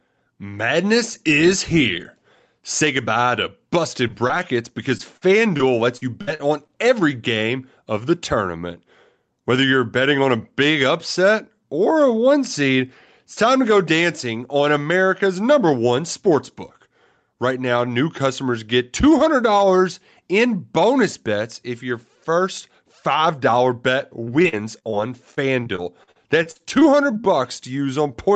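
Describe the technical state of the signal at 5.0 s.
Right around 5.0 s there's a short concealed packet loss, running from about 4.97 to 5.01 s. Roughly 20 ms of audio never arrived in time, and the receiver patched 18 ms of it by extending the sound it had just played before crossfading back into the real signal. What you hear is a tiny smear or wobble in the speech, and a quick consonant there can slip away.

The same moment also carries the gain pumping that runs through the whole clip, with the level swinging by a few decibels. That leaves loud and quiet passages sitting closer together than they should, so the sound comes across a bit squashed. The likely cause is mic gain set too hot, with a fast limiter or compressor clamping it down on every peak.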